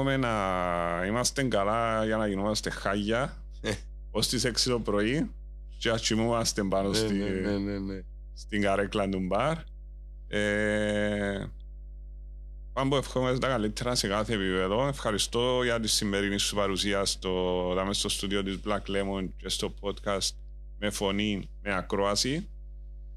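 Mains hum runs from the first second to the last, a steady low drone at 50 Hz sitting under the speech with some low harmonics above it. Power-line current has leaked into the signal path, most likely through a ground loop between connected devices or from a transformer close to the cabling. The hum is strong, only about 15 dB below the speech, so it stays clearly audible even while someone is talking.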